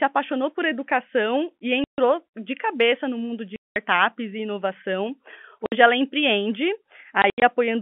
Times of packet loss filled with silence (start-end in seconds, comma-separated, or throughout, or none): 1.84-1.98, 3.56-3.76, 5.66-5.72, 7.22-7.42